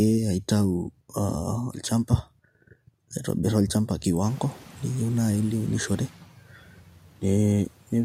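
Short speech recording with speech cut by the noise suppressor between 6.1 and 7.23 s. About 0.7 s of speech in there gets pulled down with the background, by about 13 dB at worst, so endings and softer bits sound swallowed. The room noise jumps by about 22 dB somewhere around 4.5 s and still sits about 27 dB under the speech.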